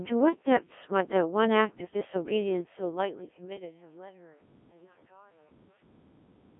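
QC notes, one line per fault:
Throughout: Codec 2 vocoder. The speech has a robotic, buzzy character, and nothing sounds above about 3.7 kHz within a line band of roughly 250 to 3400 Hz. The damage is heavy, which fits the 1.3 kbit/s mode. Only pitch, voicing, energy and a coarse spectral envelope survive, and sine-wave resynthesis rebuilds the speech. Band-limiting alone would sound muffled, and a lossy waveform codec would sound swirly, but here the voice itself turns synthetic.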